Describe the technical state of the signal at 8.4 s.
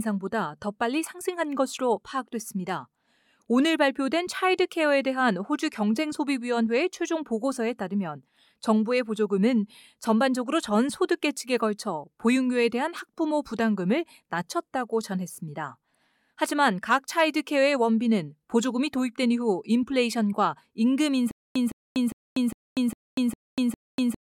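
At 8.4 s the speech signal is intact, with no technical fault present at that moment.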